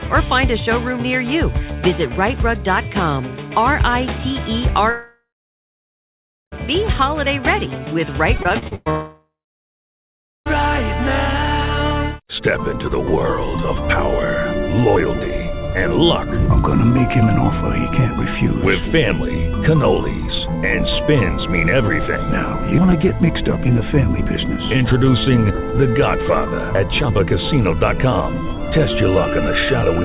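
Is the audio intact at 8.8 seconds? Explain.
No. From 8.38 to 8.88 s the audio turns choppy and robotic, with about half the span patched over: this is repeated packet loss, each missing piece concealed by extending the previous sound. Then, from 8.90 to 10.48 s, a fading buzz or hiss gives way to about 1.1 s of silence, likely a long network dropout.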